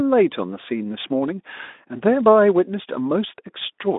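Nothing's wrong here: it's a short speech recording, and there's no technical fault anywhere in it.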